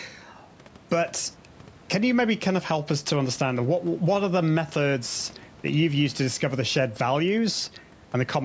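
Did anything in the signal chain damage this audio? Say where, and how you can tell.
No, nothing in the signal chain damaged this audio.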